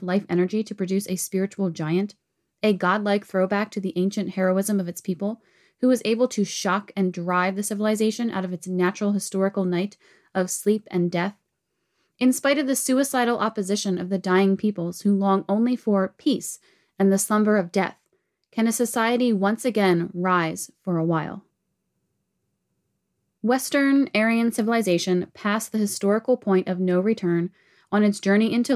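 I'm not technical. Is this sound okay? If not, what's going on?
Yes, this speech recording sounds fine, with no technical problems to point out. There is nothing here that needs explaining or fixing.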